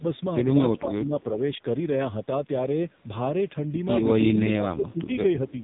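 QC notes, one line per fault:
Throughout: AMR narrowband mobile codec. Nothing above 3.8 kHz, with a buzzy, synthetic tone that fits a low rate around 5.9 kbps, where the coder keeps only a coarse vocal-tract model and a few pulses.
0.0–0.05 s, 0.79–1.4 s, 4.52–5.15 s, 5.51–5.58 s: speech suppressed in double talk. Level dips by about 10, 15, 20 and 5 dB, likely from an echo canceller ducking the talker while the far side spoke.
5.48 s to end: echo leak. A very faint copy of the voice returns about 316 ms late, likely loudspeaker pickup that the far-end canceller failed to remove.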